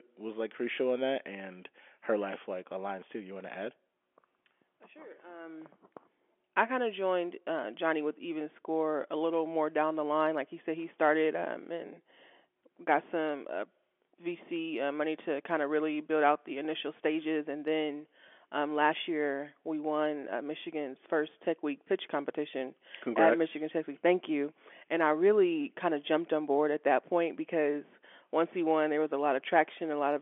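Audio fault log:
No faults can be heard in this speech, which carries the narrow 250 Hz to 3.4 kHz band of G.711 telephone coding with at most a faint trace of its level-following quantisation noise.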